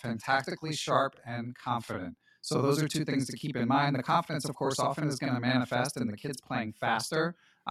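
From start to finish the speech carries a doubled quality, as though every syllable is spoken twice in quick succession, with a second copy trailing the first at equal loudness and smearing consonant onsets into a short slap. This is channel delay (doubling): one channel runs 40 ms behind the other, and when the two are summed to mono the late copy stands apart as a distinct echo rather than blending in.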